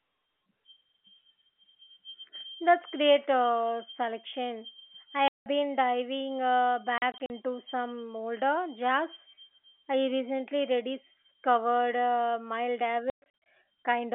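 Packet loss filled with silence cuts this speech at 5.28–5.46 s after "great uh selection I", at 6.98–7.3 s in short scattered gaps, and at 13.1–13.46 s. Missing packets play as silence, leaving hard-edged holes in steps that fit 20 ms packets.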